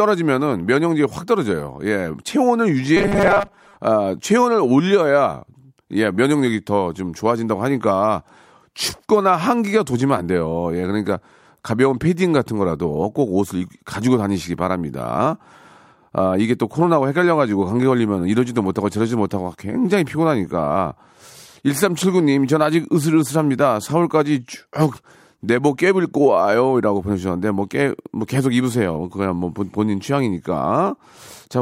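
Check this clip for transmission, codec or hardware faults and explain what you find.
Robotic sound from repeated short buffers appears from 2.97 to 3.77 s. For that stretch the speech turns into a rigid, metallic buzz pitched at 200 Hz, roughly tracking the syllables. The likely cause is audio arriving too slowly, so the playback side keeps looping the most recent fragment, here about 5 ms long, to fill the gap. Around half of that stretch appears to be repeated material rather than new audio.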